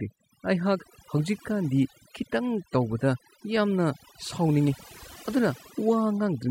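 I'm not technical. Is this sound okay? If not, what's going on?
No, not quite. All the way through this speech clip there's a case of overdone noise removal. Someone ran a noise-cleaning tool on it and turned it up too far. The tool wipes out anything it thinks looks like background hiss, and it's been cutting away the softer parts of the voice too. So the gaps between phrases fall almost silent except for little twinkly specks.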